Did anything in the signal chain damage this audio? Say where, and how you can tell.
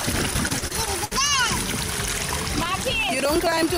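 Yes. From 0.33 to 1.13 s the network stage shows repeated packet loss, giving a robotic sound. Six holes open in quick succession, the longest 65 ms. Each is patched by stretching the previous sound, so about a fifth of that stretch is synthetic, choppy and robotic.

From 2.66 to 3.68 s there are periodic USB or driver dropouts at the driver or buffer stage. Ticks come every 54 ms, around twenty in all. Each skips roughly 10 ms of audio outright. A bus or driver stall is repeatedly interrupting capture.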